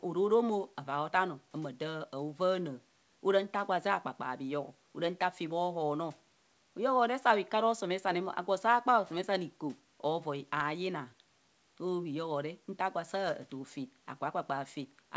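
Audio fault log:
No faults are heard in the speech. The call path keeps the sound band-limited, with nothing above 8 kHz, which fits a wideband call codec such as G.722.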